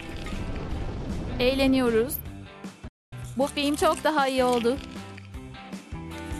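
The audio has a single digital broadcast dropout from 2.88 s to 3.13 s. The sound fades to silence over about 3 ms, stays muted for 240 ms, then resumes further along in the programme, so the material in that gap is missing rather than delayed. The length fits roughly ten lost frames of about 24 ms each. The receiver lost the signal or rejected corrupted frames and muted until valid data returned.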